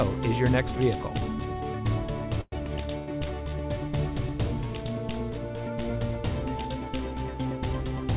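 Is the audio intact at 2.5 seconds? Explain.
No. From 2.41 to 2.54 s a call audio freeze stretches the last sound into a fading buzz or hiss with 30 ms of silence before the audio resumes where it stopped. The likely cause is delayed packets draining the jitter buffer.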